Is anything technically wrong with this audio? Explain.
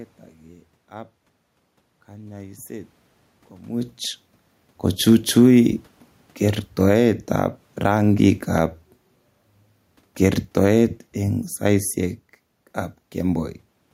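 Yes, the speech clip has automatic gain control problems. Automatic gain rising occurs from 0.89 to 3.99 s, 5.48 to 8.43 s and 10.72 to 11.09 s: the gain control judges the input too quiet and lifts it by about 3 dB each time, so voice and room noise swell together. Near 3.5 s the talker's distance from the microphone also shifts the level. Automatic gain falling runs from 10.08 to 13.69 s: the control judges the input too loud and pulls it down by about 5 dB, so speech and background sink together.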